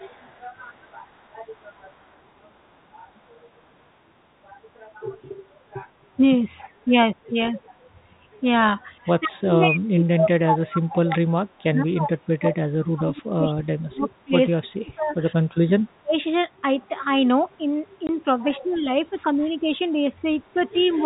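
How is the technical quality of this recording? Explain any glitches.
The recording has several call-path faults, spread across the clip, with the longest in the middle and several toward the end. It is narrowband telephone speech, with nothing above 4 kHz.

Echo leak runs from 0.0 to 2.2 s and returns briefly at 17.52 to 17.56, 18.74 to 18.78 and 19.38 to 19.42 s. A faint copy of the speech trails it by 167 ms, far below the main signal. The likely cause is a loudspeaker echo canceller that let some of its microphone pickup through.

Speech suppressed in double talk appears as a brief dip of about 10 dB at 6.85 to 6.93 s. It becomes a very deep fade from 9.06 to 16.17 s. From 17.58 s to the end, the level sinks moderately. This is likely an echo canceller ducking the talker while both sides spoke.

Packet loss filled with silence causes a 20 ms hole at 18.07 to 18.09 s, which fits two 10 ms packets. 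Missing audio was replaced with nothing. The gap has abrupt edges, so it sounds like a short, hard-cut dropout.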